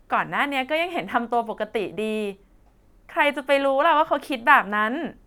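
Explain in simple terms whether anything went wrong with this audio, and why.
Nothing went wrong here; no audible fault turns up anywhere in this speech recording.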